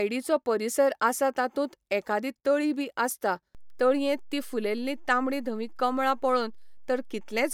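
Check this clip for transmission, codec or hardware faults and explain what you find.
One fault is present: a DC step in this speech clip at 3.55 s, with the offset holding until the end at 7.54 s. The waveform's zero line jumps abruptly by about -40 dBFS and stays displaced rather than decaying or returning, consistent with a converter recalibrating or an offset input being switched in. The onset is heard as a single low thump or click, while the speech itself continues unchanged across and after the step.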